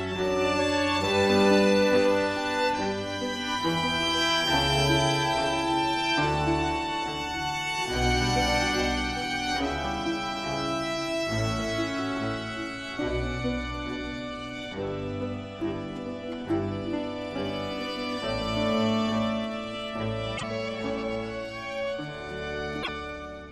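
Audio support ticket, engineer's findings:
Brief garbled glitch with a skip forward, 20.36–20.43 s and 22.82–22.89 s; likely broken MP3 bit reservoir, post-cut frames decoding borrowed bytes, roughly three 26.1 ms frames.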